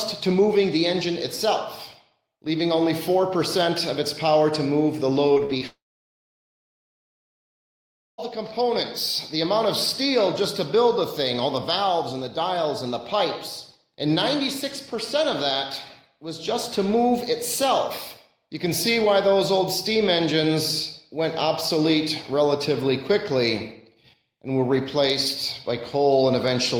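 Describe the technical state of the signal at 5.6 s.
At 5.6 s you're near the end of repeated packet loss, running from 5.33 to 5.63 s. There are four short holes, the longest about 43 ms, each patched by stretching the previous sound. Roughly 40% of that stretch is concealed, so it comes across choppy and robotic.

Right after, at 5.67 s, the audio cuts out until 8.2 s. That's likely a long network dropout. The last sound smears briefly, then there's about 2.4 s of silence before the audio picks up again, with that whole section simply gone.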